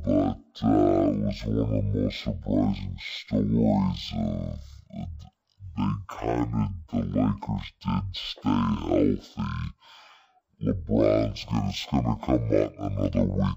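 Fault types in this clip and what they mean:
Stereo read as mono: The left and right samples are taken in turn as one channel. So the speech runs the whole way through at half speed. It sits 12 semitones low, a full octave down. A fainter mirrored copy shows in the upper half of the spectrum.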